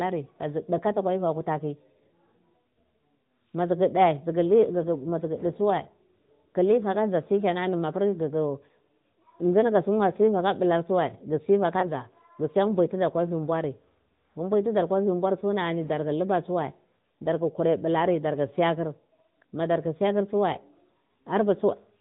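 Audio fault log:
throughout AMR narrowband mobile codec: the speech sounds buzzy and somewhat synthetic, with plainly audible codec damage and nothing above 4 kHz. This points to AMR-NB at about 10.2 kbps, which samples at 8 kHz and rebuilds speech from a vocal tract model driven by a few pulses.
11.80 to 11.91 s lost AMR speech frames: a brief dip that passes in about a tenth of a second. This fits a single lost 20 ms frame. The decoder filled the gap by reusing the last good pitch and vocal tract settings at lowered gain until good frames resumed.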